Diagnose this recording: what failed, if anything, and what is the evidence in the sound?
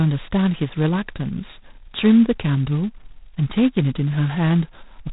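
The failure is at the codec stage: the speech runs through G.726 ADPCM for its whole length, with heavy damage. A harsh, rasping hiss rides on the speech and rises and falls with its level, and nothing passes above 3.9 kHz. Each sample is coded as a small difference from an adaptive prediction, and with so few bits per sample the quantisation error turns into that level-tracking grit, which points to the 16 kbit/s mode.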